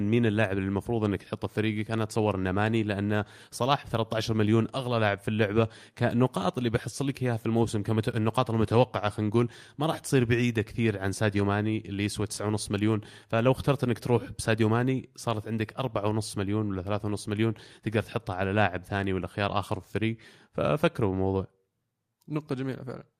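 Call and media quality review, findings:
No defects found in the speech signal; level, continuity and timing hold steady across the recording with nothing for the call or media path to answer for.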